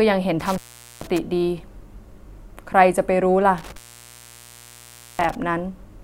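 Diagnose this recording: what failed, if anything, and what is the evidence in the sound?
The speech drops out twice, from 0.40 to 1.18 s and from 3.58 to 5.35 s, with crackle at each edge and faint hiss during the gaps of about 0.44 s and 1.42 s. This is intermittent contact in the analogue wiring: a loose cable or plug briefly opens the signal path.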